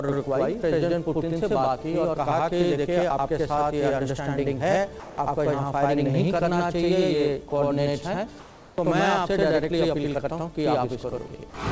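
All the way through there's a channel delay doubling: one channel runs about 85 ms late, which fits a 4096-sample buffer, so the mono sum carries a same-level slap right behind everything.

At 5.00 to 5.18 s, again at 7.50 s and at 11.50 to 11.54 s, the sound briefly drops out to steady hiss. That's likely the sender's voice detector taking the sound for background and the receiver filling in with comfort noise, with roughly 80, 10 and 20 ms of real sound lost.

From 8.40 to 8.78 s there's comfort noise in place of the background. The real background, sitting about 25 dB under the loud parts, is likely swapped for smoother synthetic noise about 1 dB quieter. All of this rides on the call codec's band limit, with nothing above 8 kHz.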